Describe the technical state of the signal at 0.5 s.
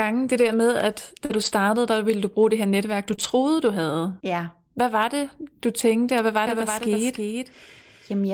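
At 0.5 s you're in a lost packet rebuilt from error correction, running about 0.39 to 0.53 s, just before "med at". The following packets carried low-bitrate copies, so roughly 80 ms was patched in with no gap, just rougher, noisier sound.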